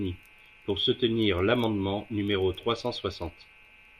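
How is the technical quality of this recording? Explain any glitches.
Nothing stood out on listening to this speech recording, and there are no glitches to explain.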